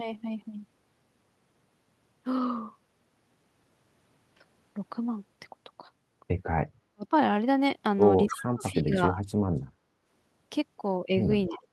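The clip is speech that dips out in three places while a faint, delayed copy of the talker creeps back in. From 6.8 to 7.13 s the voice sinks by about 40 dB, nearly to silence. From 8.26 to 9.19 s it drops again by up to about 35 dB, for roughly 0.7 s in total, and a shallower dip of about 15 dB comes at 11.48 to 11.62 s. This is speech suppressed in double talk, likely an echo canceller that, with both ends talking at once, could not tell its own talker from loudspeaker echo and turned everything down. Overlapping those dips are short scraps of the talker's own voice returning 275 ms late, at 8.26 to 8.42 s (about 10 dB below the speech), 8.6 to 8.75 s, 9.17 to 9.27 s and 11.55 to 11.67 s (each about 20 dB down). This is echo leak, likely from a far end on loudspeaker whose canceller let part of the microphone pickup of this voice pass back.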